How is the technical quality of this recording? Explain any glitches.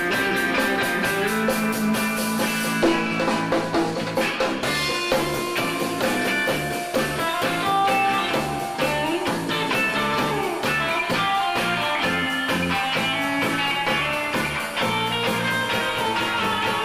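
No technical faults can be heard anywhere in the recording; the signal holds steady and continuous throughout, with nothing that disrupts the audio.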